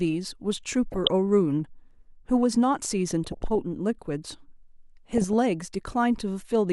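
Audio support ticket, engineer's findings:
DAB burbling at 0.92–1.07 s, 3.25–3.56 s and 5.18–5.33 s: short noise blips over the speech. Weak reception lets a fraction of a percent of bit errors reach the MP2 decoder, corrupting sub-band levels.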